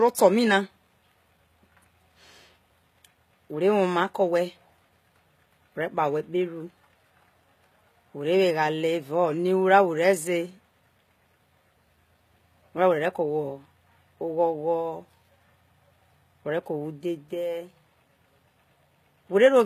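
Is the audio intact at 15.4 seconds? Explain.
No. At 15.4 seconds, as throughout the clip, the speech carries HE-AAC compression, likely HE-AAC v2 at a low rate, with the damage sounding consistent with roughly 20 kbps. Only the lower spectrum is truly coded, and the treble is synthesised by copying lower bands upward under a coarse envelope, with nothing at all above about 14.9 kHz. The highs therefore sound bright but false: misaligned harmonics make s sounds gritty and lispy.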